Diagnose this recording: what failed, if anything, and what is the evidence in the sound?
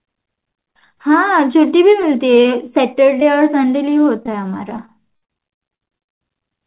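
Brief smears or wobbles in the speech at 2.02–2.04 s, 2.42–2.45 s and 3.2–3.22 s are short concealed packet loss at the network stage. Each time, 10 to 20 ms of audio arrived too late, and the decoder stretched the preceding sound across the hole before blending back.

From 4.23 to 6.09 s the speech turns choppy and robotic. This is repeated packet loss: about fifteen network dropouts, the longest 62 ms, together 380 ms, roughly a fifth of that stretch. Each hole is patched by extending the previous sound, and the next one follows soon after.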